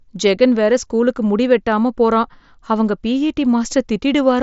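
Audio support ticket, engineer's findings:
Nothing stood out on listening to this speech clip, with the Bluetooth mSBC headset path audible only as its expected band limit near 7.7 kHz and a light codec texture.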